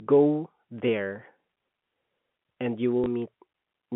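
Right after "and you", at 3.04 s, there's a brief packet loss with last packet repeated: about 20 ms of sound gets replayed, leaving a small blip.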